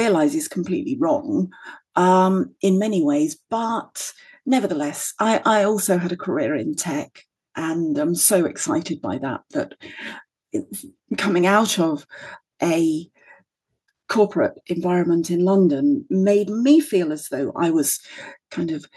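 A speech recording with nothing technically wrong with it.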